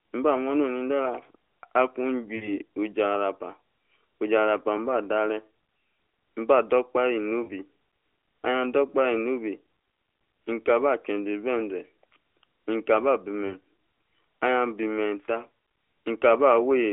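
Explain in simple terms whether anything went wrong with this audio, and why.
A few short dropouts from lost AMR speech frames, at 2.36–2.59 s, 7.44–7.50 s, and 13.46–13.54 s right after "mkaba bi". The phone decoder missed bits of the signal and filled the gaps by stretching the last good sound, so it smears briefly before speech resumes.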